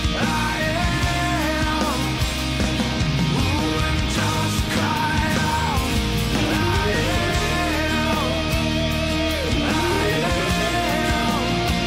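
The audio has a block of digital silence at 8.21 s: a 0.67 ms dropout, which fits a 32-sample block, heard as a single tick or dip.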